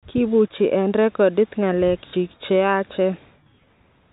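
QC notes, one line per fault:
2.1 to 2.13 s, packet loss with last packet repeated: about 30 ms of the speech went missing, and the receiver filled the gap by playing the preceding stretch again, which fits a single lost 30 ms packet. The single repeat comes across as a small blip. On the waveform, a repeated block appears with abrupt steps at both edges. The spectrogram shows thin vertical broadband lines at those joins, up to the 4 kHz ceiling of the G.711 telephone band.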